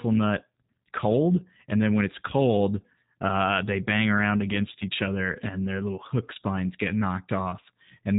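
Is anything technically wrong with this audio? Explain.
Yes, there's one problem, and it runs through the whole clip: the speech has gone through the G.729 codec, and the damage is plainly audible. This codec rebuilds the voice from a model of the vocal tract, a pitch predictor and a handful of pulses per 10 ms frame, at a rate that fits 8 kbit/s. Everything above 4 kHz is gone, so it sounds muffled, and the speech comes out rough and slightly synthetic while staying intelligible.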